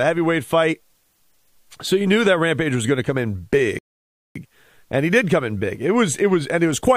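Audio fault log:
3.79 to 4.36 s, rebuffering stall: the player ran out of downloaded audio and waited for more, so the speech drops to silence for 0.57 s, then resumes exactly where it stopped.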